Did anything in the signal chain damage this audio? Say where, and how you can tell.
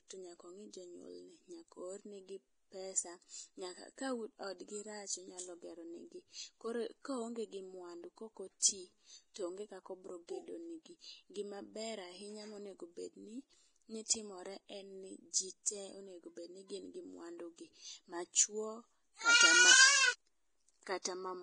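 Yes, at the codec stage. The speech is hissy and grainy throughout, with nothing above 10.6 kHz. That's likely heavy Vorbis compression, consistent with roughly 29 kbps.

Pre-echo, also from the codec: short hiss smears ahead of attacks at 9.34–9.36 s (just before "toonge kako bro gedo"), 15.63–15.66 s and 21.02–21.05 s, as block quantisation noise spills backwards.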